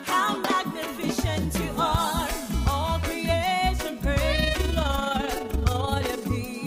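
From 4.35 to 6.33 s there is overlap-add ripple. Frames were rejoined with an overlap that does not sum evenly, so the level pulses by about 6 dB roughly twenty times a second. It sounds like a rough, fast flutter.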